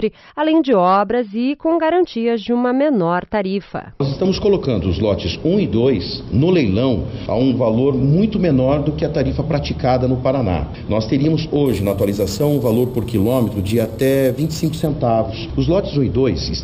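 Imaging from sample-and-hold upsampling, 11.66 to 14.87 s: samples repeated without smoothing leave a metallic fizz at 6 to 12 kHz, about 22 dB down.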